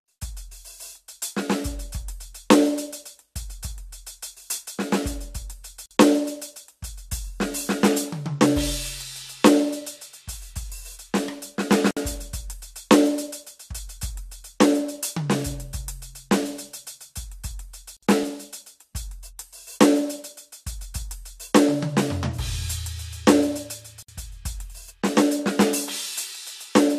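From 2.04 s to 26.3 s the music carries about ten clicks, one every 2.67 s, likely clock drift buffer slips where a few samples are dropped or repeated. They are brief ticks, not silences. At 5.86 s, 11.91 s, 17.97 s and 24.03 s, every 6 s, a gap at a join of encoded pieces opens for about 50 to 60 ms. Encoder delay and end padding leave a real dropout with smeared edges before the music resumes.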